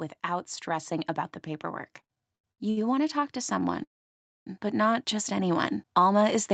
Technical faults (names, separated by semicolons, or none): automatic gain rising; repeated stalls (stutter); call audio freeze